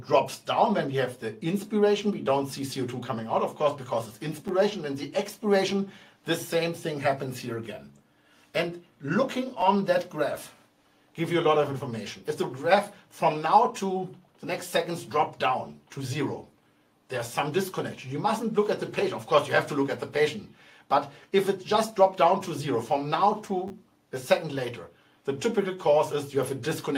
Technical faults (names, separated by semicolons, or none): repeated buffer